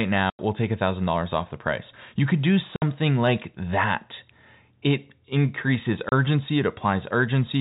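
Speech carried over a G.711 telephone path, limited below 4 kHz, shows packet loss filled with silence: hard-edged gaps at 0.30 s (90 ms, before "we'll take"), 2.76 s (60 ms, between "could do" and "like that") and 6.09 s (30 ms). These lengths are multiples of 30 ms, which fits 30 ms packets.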